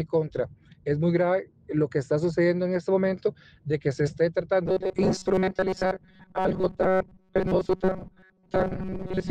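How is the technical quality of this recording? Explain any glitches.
The recording has one clear glitch: robotic sound from repeated short buffers, running from 4.66 s to the end at about 9.3 s. The sound turns into a rigid, metallic buzz fixed at 188 Hz. That pitch matches a chunk of roughly 5.3 ms being replayed, likely because new audio arrived too slowly and the last fragment was looped, with most of the real material skipped. Unlike dropouts, there are no silent gaps, and unlike flanging, the pitch stays locked rather than sweeping.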